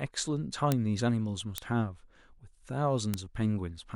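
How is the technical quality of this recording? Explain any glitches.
Three isolated ticks mar the speech, at 0.72 s, 1.58 s and 3.14 s. Each is a bit error spike: a single flipped bit in one sample (three at 1.58 s) throws the value by a power of two, peaking at about -7 dBFS (about -13 dBFS at 1.58 s), producing a sharp, broadband click unrelated to the speech.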